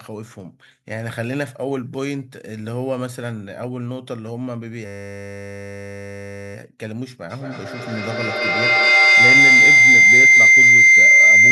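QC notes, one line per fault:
4.86–6.55 s, system hang loop: the audio gives way to a flat, steady buzz pitched at 100 Hz that holds for about 1.7 s. A single 10 ms fragment repeats exactly, 169 times, because the system stalled while the sound hardware kept replaying the same short stretch of its ring buffer. A loop that short cycles fast enough to be heard as a tone rather than a stutter. Afterwards the audio resumes with next to nothing skipped.
7.3–11.51 s, feedback howl: a shrill whistle near 2 kHz swells until it sits about 15 dB above the speech, pulsing roughly every fifth of a second, and it continues to the end of the clip. Sound from a loudspeaker is re-entering a microphone on the same call and gaining level on each pass. The loop favours that frequency band, so each round trip reinforces the same pitch, and the pulsing follows the loop's delay.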